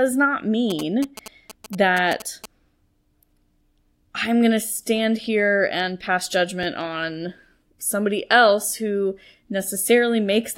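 From 0.70 to 2.46 s you can hear GSM signalling bursts: a nearby 2G phone is talking to its network, and the audio circuit rectifies its radio pulses. It's a galloping dit-dit-dit of short 217 Hz buzzes, about 15 dB below the speech.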